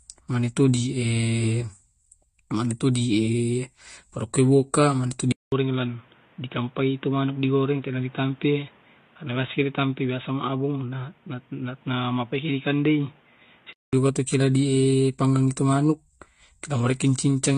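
Throughout the speech there is nothing above about 10.1 kHz, with a plainly audible smeared, fizzy texture on sibilants and held vowels. This is likely AAC compression, whose encoder lowered the cut-off and coarsely quantised the spectrum, which fits a low bitrate around 32 kbps.

At 5.32 s a gap of about 200 ms is followed by a boxy, duller sound, cut off above 3.8 kHz, some 5 dB quieter, with new background noise roughly 35 dB down. This is likely an input switched to a poorer device, lasting until 13.93 s, when the fuller band returns.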